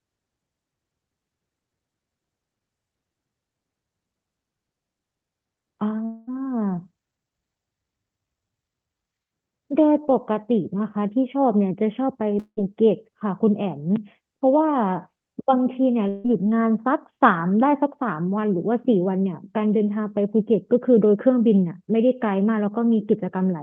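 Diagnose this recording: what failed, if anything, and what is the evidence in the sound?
The network stage dropped the audio in a likely long network dropout at 6.05–6.29 s, 12.39–12.59 s and 16.09–16.27 s. In each gap the last sound is stretched into a fading buzz for roughly 0.15 to 0.22 s, and the second gap ends in about 70 ms of silence. The sound then resumes further on with that stretch missing. The synthetic fading fill and the lost material set this apart from a plain mute or a brief single-packet glitch. All of this sits on an Opus call path limited to about 8 kHz.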